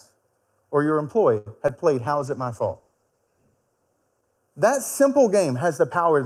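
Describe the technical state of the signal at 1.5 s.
A short stall from a late packet runs from 1.37 to 1.48 s, right after "or your". The packet arrived late and the jitter buffer emptied, so the receiver held the last sound for about 86 ms and then resumed without losing anything. That leaves the sound audibly stretched with a slight buzz or dip, and everything afterward plays 86 ms later.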